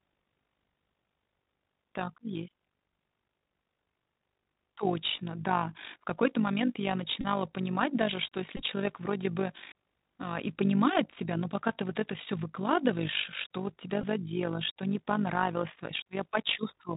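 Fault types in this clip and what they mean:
Bluetooth CVSD headset codec: narrowband one-bit delta coding throughout, nothing above 4 kHz, scratchy s sounds and granular hiss; unlike plain low-pass filtering, loud highs distort as the step lags.
Overlap-add ripple: frames rejoined with uneven overlap gain, so level swings about 11 dB at roughly 50 Hz, a constant rough tremolo rather than intermittent bursts.
Bluetooth headset packet repeated: lost packets replayed, giving brief buzzes near 267 Hz at 7.21–7.26 s after "момент я", 8.57–8.63 s and 14.01–14.03 s, unlike steady ripple.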